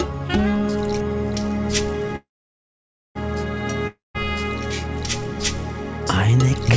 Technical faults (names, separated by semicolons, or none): call audio freeze; long network dropout